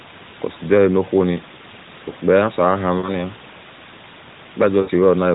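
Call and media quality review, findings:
Lost AMR speech frames, 2.98–3.12 s and 4.82–4.91 s: brief drawn-out, fading dropouts, consistent with three 20 ms frames concealed by decoder repetition, then weak recovery.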